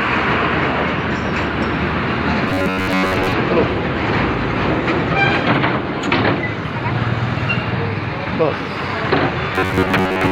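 From 2.48 to 3.32 s and again from 9.55 s to the end, the sound turns into a rigid, metallic buzz locked near 94 Hz: robotic sound from repeated short buffers, likely from a 10.7 ms chunk replayed over most of the span. Unlike a steady comb-filter tint, the underlying audio is skipped.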